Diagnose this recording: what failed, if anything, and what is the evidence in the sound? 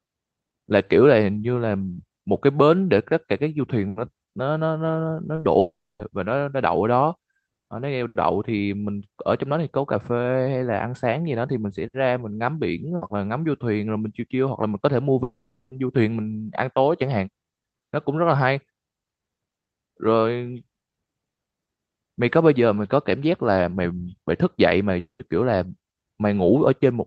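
Short concealed packet loss, network stage, at 5.35 to 5.43 s: two back-to-back gaps of about 20 ms each in the speech, heard as a brief smear or wobble rather than a clean cut. The decoder received nothing for those moments and filled them by extending the preceding sound, pitched if voiced and noise-like if not, then crossfaded back into real audio. It all sits on an Opus call path whose band stops around 8 kHz.

Long network dropout at 5.59 to 6.01 s, 15.23 to 15.73 s, and 24.99 to 25.21 s. Each time the speech turns into a synthetic continuation that fades. In the first, about 0.27 s of silence follows. The 15.23 s gap is bridged by fill throughout. The last ends in about 0.11 s of silence. Speech then resumes further on with that stretch simply gone, most likely because the jitter buffer ran dry while packets stopped arriving.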